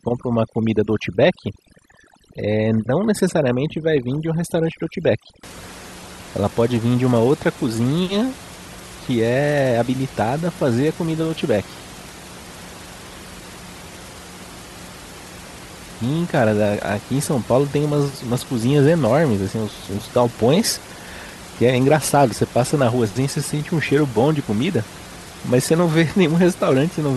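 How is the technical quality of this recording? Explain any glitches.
The first stretch of the recording carries a processing fault. From 0.0 to 5.43 s there is overdone noise removal. A noise reduction stage was set too aggressively. It drives narrow frequency bands down or off whenever they sit near its noise estimate, taking soft parts of speech with them. Gaps fall nearly silent with twinkling specks. After that, the room noise sits about 19 dB below the speech.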